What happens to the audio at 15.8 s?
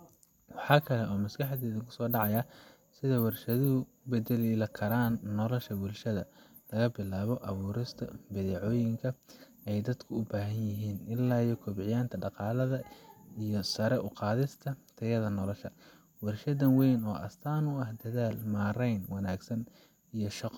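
At 15.8 s the speech continues cleanly, with no dropout, click, distortion or other technical fault at that point.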